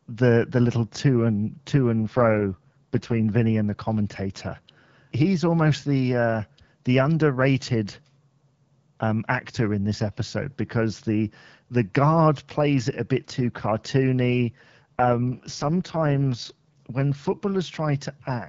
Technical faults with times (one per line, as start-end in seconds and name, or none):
1.99-3.20 AMR rate drop
14.82-16.77 AMR rate drop